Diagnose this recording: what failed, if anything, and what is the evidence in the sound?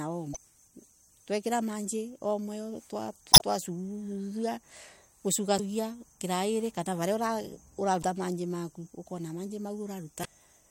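The codec stage failed: there's damaged data in the compressed stream, heard as short disruptions at 0.33–0.37, 3.30–3.42, 5.56–5.60, 8.01–8.04 and 10.21–10.26 s. At each one the decoder hits corrupt frames, mangles or drops them, and resyncs at the next good header.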